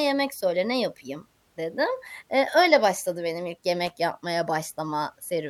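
At 3.87 to 3.90 s, just after "öyle başladı benim ilk", a brief loose connector crackle breaks through the speech. A worn or dirty contact is making and breaking, chopping the signal, heard as a short, irregular burst of scratching.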